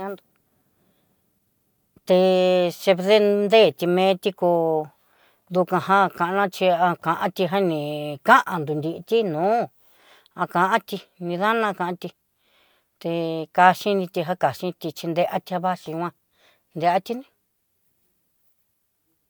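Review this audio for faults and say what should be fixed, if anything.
No faults turned up in this audio, so nothing needs to be fixed.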